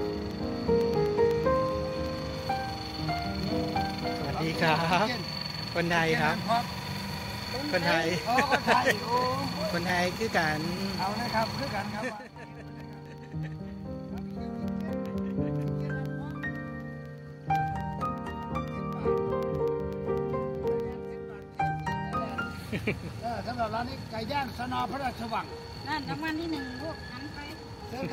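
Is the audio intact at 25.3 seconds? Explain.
No, 25.3 s sits inside periodic USB or driver dropouts running from 0.06 to 28.05 s: every 0.125 s a tiny sliver drops to silence, ticking steadily under the sound.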